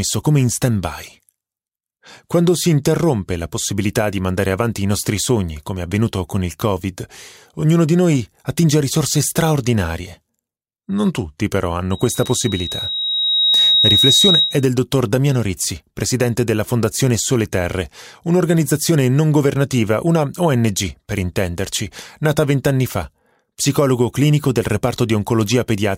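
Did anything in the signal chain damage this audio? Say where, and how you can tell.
Yes. A loudspeaker feedback squeal runs from 11.91 s to 14.65 s, arising in the analogue stage where a microphone hears the loudspeaker it drives. A single tone at 3.8 kHz swells over about a second and a half until it sits roughly 5 dB above the speech. That steady build at one pitch shows the acoustic loop's gain passing unity at that frequency, so the tone kept feeding itself.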